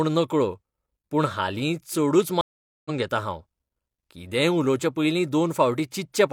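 At 2.41 s, right after "पूण हालीं चडूच", the speech cuts to about 0.44 s of silence, a stream reconnect that runs until 2.91 s. The link dropped, and the player rejoined with a fresh decoder, so it picks up at "घेतां हांव" roughly 0.4 s further along, with that stretch of speech simply missing. That skip tells it apart from a plain dropout, where the sound would continue from where it stopped once the gap ended.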